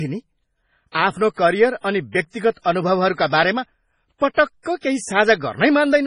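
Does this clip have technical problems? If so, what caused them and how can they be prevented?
Yes. Throughout the speech nothing sounds above about 10.5 kHz, and heavy watery, swirling artefacts come and go, likely from MP3 compression at a low bitrate near 24 kbps. Unlike a plain low-pass filter, the damage shifts frame to frame rather than staying constant. Encoding at a higher bitrate prevents it.

From 4.78 to 4.83 s a hiss runs for about 53 ms ahead of a sharp attack, a pre-echo. The codec spread quantisation noise across a block that held a loud onset. Unlike reverb or echo, the smear comes before the attack, not after it. A higher bitrate or a codec that switches to short blocks at transients prevents it.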